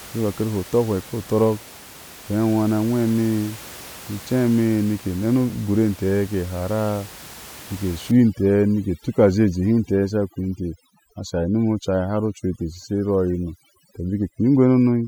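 From 8.11 s to the end, overdone noise removal sets in: room noise about 20 dB below the speech is pushed toward silence, leaving twinkling specks, while quieter speech detail is stripped. A spectrogram shows scattered isolated dots between gaps, with a speckled, holed texture.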